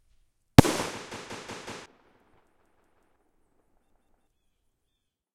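Everyday sound with a repeated buffer at 1.12–1.86 s, 2.60–3.16 s and 3.90–4.27 s: the same 186 ms chunk, which fits an 8192-sample buffer, replays with hard joins, skipping roughly 0.4 to 0.7 s. Unlike an echo, the copies don't decay.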